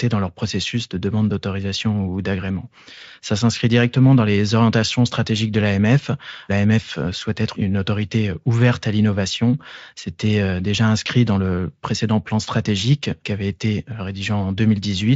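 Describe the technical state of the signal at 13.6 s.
At 13.6 s the speech is intact, with the Speex coding carrying it cleanly and no fault present at that moment.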